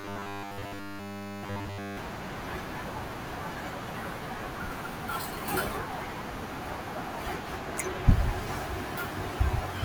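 Speech clip with robotic sound from repeated short buffers from 0.01 to 1.97 s: a rigid 100 Hz metallic buzz, likely from nearly every 10 ms buffer being repeated.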